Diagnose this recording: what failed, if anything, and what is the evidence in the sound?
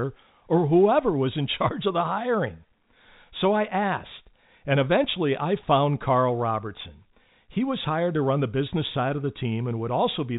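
Nothing failed, and the sound gives no evidence of any fault.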